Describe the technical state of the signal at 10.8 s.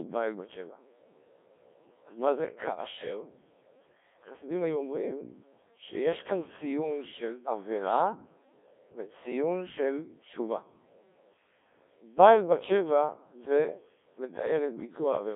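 At 10.8 s you're hearing the Codec 2 vocoder, which runs through the whole clip. Only pitch, voicing, energy and a rough spectral envelope survive, and the speech is rebuilt from sine waves, so it's heavily robotic and buzzy, which fits a 1.3 kbit/s mode. It's confined to roughly 250 Hz to 3.6 kHz, with nothing above 3.8 kHz.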